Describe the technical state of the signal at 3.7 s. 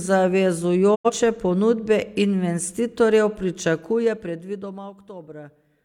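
A soft ticking rides on the speech as it fades after "ponudbe investitorjev": zipper noise from 3.62 to 5.11 s, the roughly 20 dB drop applied in unsmoothed 2 dB steps, about seven per second.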